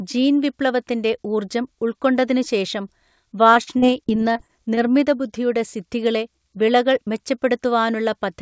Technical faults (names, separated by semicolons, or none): repeated packet loss (robotic sound)